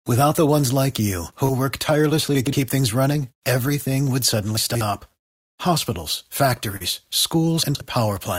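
Short concealed packet loss first appears at 1.45 to 1.50 s. About 20 ms of the stream failed to reach the decoder in time. The receiver extended the preceding sound for roughly 30 ms, carrying on its pitch or shaped noise, and then crossfaded back into the real signal. The result is a brief smear or wobble. At 2.35 to 2.53 s, chunks out of order occur: a 60 ms chunk plays two chunk-lengths late, after the two chunks that should follow it. Nothing is missing, but the sequence is scrambled across 180 ms, with three hard joins and a momentarily jumbled sound. The same fault returns at 4.57 to 4.81 s, where a 60 ms chunk lands three chunks late. The disordered stretch grows to 240 ms, so the garbling lasts longer. A second short concealed packet loss at 6.76 to 6.82 s covers a larger gap of about 40 ms with a fill of roughly 39 ms. It is heard as a brief smear. Chunks out of order occur a final time at 7.63 to 7.81 s, with a 60 ms chunk two positions late, producing another brief jumble.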